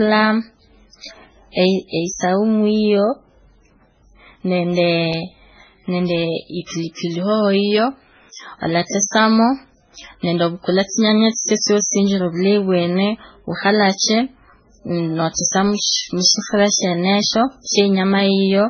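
Throughout the speech, nothing sounds above 6.3 kHz. The top is dull. Two different kinds of swirly, smeared artefacts sit on top of each other. This is likely transcoding between lossy codecs, a very low-rate MP3-like encode re-encoded as AAC-LC.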